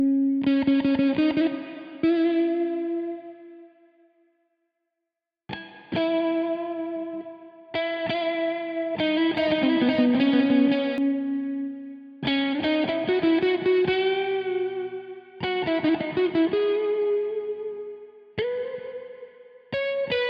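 From 9.38 to 10.98 s there's a doubled audio track: a second full-band copy of the sound trails the original by around half a second, at roughly the same level, with no decay or room colour. It likely comes from an edit holding two copies out of step, and it cuts in and out abruptly.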